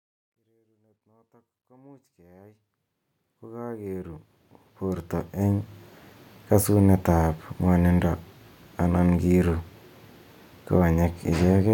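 Nothing stood out on listening, apart from the speech easing in with a gentle fade-in that ends around 5.9 s.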